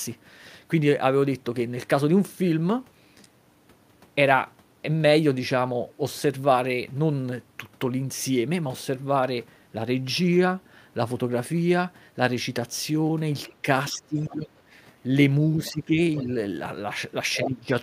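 From 13.48 to 13.55 s a faint second voice slips under the speech, the other side's voice leaking through, most likely because the echo canceller left some of the loudspeaker signal in the microphone path. It returns at 13.86 to 13.92 s and 14.23 to 14.6 s, and at 16.16 to 16.23 s it is louder, though still well below the talker. At 17.34 to 17.5 s it is nearly as loud as the talker. This fault adds an extra voice, where the suppression below takes sound away.

Overlapping the first leaks, from 13.62 to 14.48 s, the talker's own voice dips by about 15 dB for roughly half a second in pieces. This is speech suppressed in double talk. The likely cause is the canceller confusing simultaneous talk with echo and turning everything down. It recurs from 15.71 to 16.29 s and again from 17.36 to 17.72 s, where the drop reaches about 20 dB. It sounds like the near voice ducking or breaking up, not like a new voice appearing.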